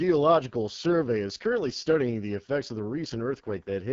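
Across the whole recording the speech carries AMR wideband (HD Voice) codec damage, heavy enough to suggest its lowest 6.6 kbit/s mode. The pulse-driven vocal tract model runs short of bits, leaving voices rough and raspy, with only synthetic noise filling the top band and nothing above 7.2 kHz.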